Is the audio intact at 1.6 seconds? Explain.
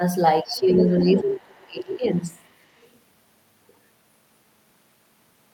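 No. From 0.42 to 2.3 s the speech is suppressed in double talk, pulled down by up to roughly 25 dB. The likely cause is an echo canceller confusing the talker with loudspeaker echo. The waveform's envelope sags. At 1.62 to 1.66 s, the other side's voice leaks through very faintly, likely residual loudspeaker echo, showing as a brief, weak smear of energy.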